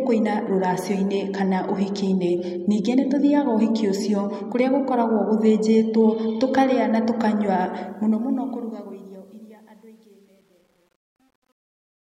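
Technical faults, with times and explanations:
7.73–12.19 s, truncation distortion on a fade: as the speech fades out, the fade keeps too few bits and adds no dither, consistent with roughly 10-bit resolution. Its tail becomes coarse steps, sounding gritty from 8.93 s to 12.19 s.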